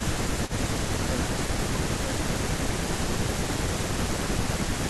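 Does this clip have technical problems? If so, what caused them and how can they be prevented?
Yes. There is an echo leak from 0.47 to 0.51 s. A faint, delayed copy of the speech returns 248 ms late, about 20 dB below it. The likely cause is a loudspeaker on the other end whose echo canceller let some of its own playback through. A headset or a well-tuned echo canceller there would prevent it.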